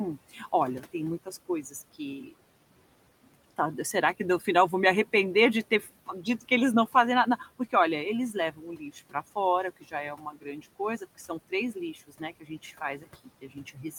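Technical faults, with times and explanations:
0.3 to 2.33 s, 3.32 to 4.47 s, 5.71 to 7.73 s, 8.33 to 9.15 s and 9.81 s to the end: speech cut by the noise suppressor. The suppressor mistakes parts of the speech for the room noise, which sits about 20 dB below the speech. Short stretches, about 0.15 to 0.4 s in the first four spans, drop by about 12 to 17 dB. Parts of the speech sound swallowed or faint after "vou me arrepender de", after "olha eles" and after "fora que".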